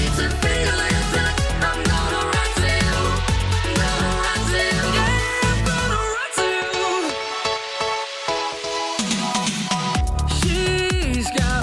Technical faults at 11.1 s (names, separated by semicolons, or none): resampler restarted on every block